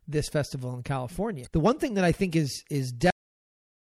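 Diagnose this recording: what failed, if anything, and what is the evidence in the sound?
MP3 compression runs throughout the speech, at the codec stage. Weak high detail swirls in and out frame by frame, giving s sounds a watery, chirpy edge and softening consonant attacks. This plainly audible damage fits a likely low bitrate of around 64 kbps.

Damaged data in a compressed stream occurs from 1.43 to 1.47 s, just after "this festival in", at the storage or network stage. A brief glitch is the decoder misreading corrupted frames and resynchronising on the next valid frame header.

The cut-off end comes at 3.10 s, at the playback or storage stage. The speech stops in the middle of a sound and drops straight into digital silence with no natural decay, because the final buffers were never written or played out.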